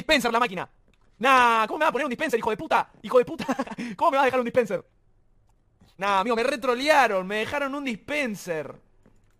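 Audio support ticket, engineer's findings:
Time-stretched section, 0.0 to 6.38 s: likely a time-stretch stage squeezing this span to fit a target length at 1.87x speed, holding pitch by discarding short slices. Sound is rushed. Pace slows abruptly at 6.38 s, pitch unchanged throughout.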